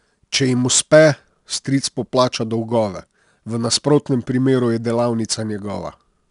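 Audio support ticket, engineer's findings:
4-bit ADPCM compression, throughout speech. Gritty, level-tracking hiss riding every loud syllable; plainly audible. Each sample coded as a coarse 4-bit step off a prediction, adaptive step size. Nothing above 10.6 kHz, which fits a sampling rate near 22 kHz.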